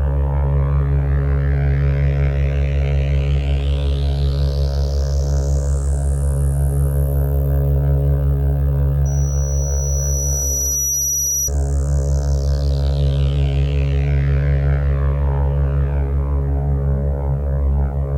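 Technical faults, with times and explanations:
9.05–11.51 s, loudspeaker feedback squeal: a piercing 5.8 kHz tone swells over roughly two seconds to about the sound's own level, as the microphone re-amplifies the loudspeaker.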